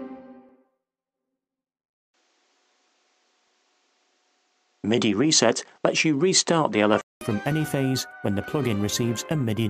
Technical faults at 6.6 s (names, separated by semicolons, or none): input switched to a poorer device